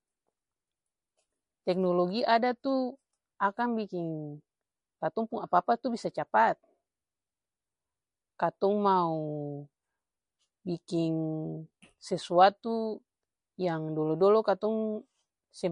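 Speech with plainly audible codec damage running through the whole clip, likely from MP3 compression: nothing is left above 10.6 kHz, and the thin, watery swirl on sibilants and smeared consonant attacks fit a starved encoder at roughly 40 kbps switching weak frequency lines on and off.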